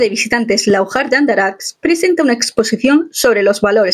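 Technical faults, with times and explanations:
Throughout, gain pumping: the input gain is likely set well above what the microphone needs, so a fast limiter or compressor has to pull the level down each time a loud sound arrives. The gain swings by roughly 10 dB. Loud and quiet passages sit unnaturally close together, giving the whole sound a squashed, breathing quality.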